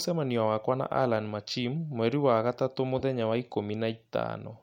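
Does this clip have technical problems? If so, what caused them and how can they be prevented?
Yes. A corrupt frame decoded appears from 2.99 to 3.03 s, just after "wa gatatũ". Damaged bits were decoded anyway. This put a short burst of energy at wrong frequencies, peaking near -25 dBFS, over what sounds like two frames. Error checking that conceals damaged frames prevents it.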